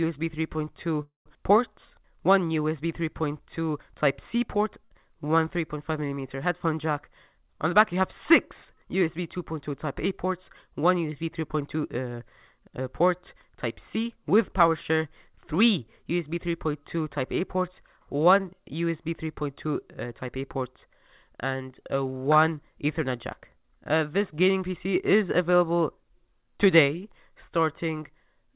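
At 1.02 s the incoming packets were likely held up in transit, so the jitter buffer ran dry: a call audio freeze. Until 1.28 s the receiver stretches the last sound into a fading buzz or hiss that drops to silence for about 140 ms. When delivery returns, the audio picks up where it stopped. Nothing is lost, but a gap of roughly 236 ms has been inserted, and everything after it plays that much later.

From 4.84 to 4.93 s a burst of packet loss removes about 60 ms of audio that never reached the receiver in time. Concealment fills the hole for around 61 ms by repeating the preceding sound and turning it down, so the sound briefly hangs as a decaying buzz or hiss. When the sound returns it has jumped ahead, and the part in between is gone.

Two jitter buffer speed-ups follow, from 7.00 to 9.69 s and from 13.36 to 15.77 s. In each, the buffer had built up more delay than it targets. To shed it, the receiver repeatedly cut out short slices of a pitch period or so, playing at 105% speed while keeping the pitch unchanged. 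That trims roughly 150 ms in the first stretch and about 100 ms in the second, and the sound comes across as slightly hurried.

Throughout, the call path passes nothing above 4 kHz, which fits a narrowband G.711-type codec.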